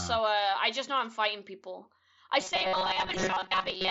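Speech, with a rigid metallic buzz at about 188 Hz from 2.41 s to the end, right after "I'm fighting people I". This is robotic sound from repeated short buffers, likely caused by a short stretch of roughly 5 ms being replayed while most of the real audio is skipped. Unlike packet-loss concealment, the pitch stays locked for the whole stretch. Inside it, at 2.80 s, concealed Bluetooth headset packet loss fills a 15 ms gap, which points to a couple of lost frames. It shows as a brief held tone with a slight warble where real audio resumes. The speech passes through the mSBC headset codec with its 8 kHz upper limit.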